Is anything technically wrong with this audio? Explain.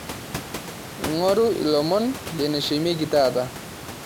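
No, nothing stood out on listening to this speech, and the room noise, about 16 dB below the voice, is part of the recording itself.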